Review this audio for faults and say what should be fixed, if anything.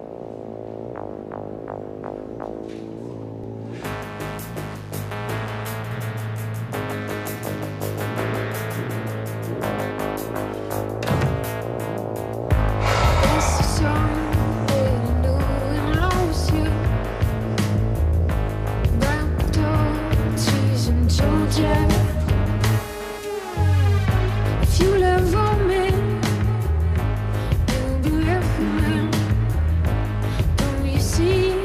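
A doubled audio track runs from 5.91 to 9.91 s: a second full-band copy trails by about 150 ms, some 5 dB quieter. Unlike a room echo, it has no decay or colouring and cuts in and out abruptly, likely from a slower duplicate capture path. Monitor only one input route into the mix so the same source can't be recorded twice.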